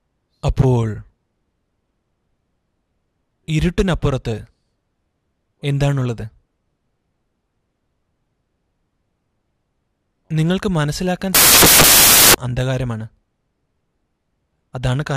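From 11.35 to 12.34 s, the reader assembled each sample from the wrong bytes, misaligned or in swapped order, so the rapidly changing low bits landed in the most significant position. For that second the audio becomes loud, harsh broadband noise.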